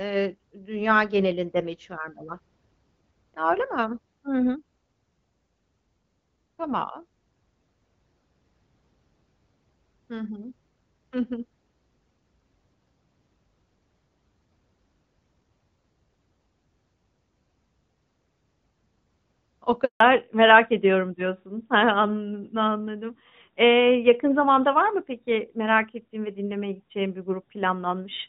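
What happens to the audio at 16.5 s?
At 16.5 s the speech carries on intact, with only the light, steady coloration of AMR wideband (HD Voice) coding at 12.65 kbit/s and no fault at that moment.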